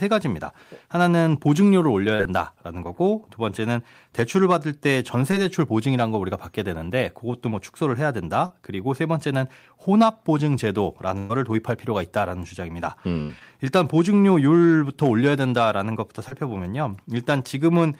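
At 2.15, 5.31 and 8.46 s, short concealed packet loss: roughly 40, 20 and 40 ms of speech failed to arrive in time. The decoder extended the preceding sound to bridge each gap, giving a brief smear or wobble before blending back.

At 11.18 and 13.21 s come bursts of packet loss, about 120 and 80 ms missing. Concealment holds the last sound and fades it, heard as a sustained buzz or dying hiss, then speech resumes further along with that stretch gone.

At 16.28 s, one more short concealed loss of about 20 ms produces a similar small smear.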